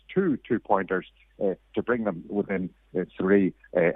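No technical fault can be heard anywhere in this audio. Nothing in it points to trouble in the recording or playback chain.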